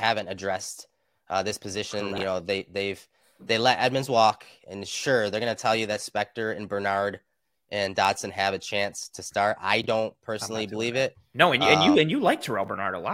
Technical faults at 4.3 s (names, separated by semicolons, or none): none